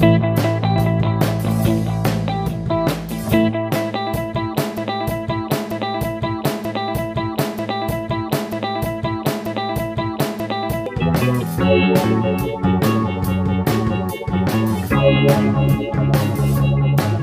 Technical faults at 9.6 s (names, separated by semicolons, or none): broken-record loop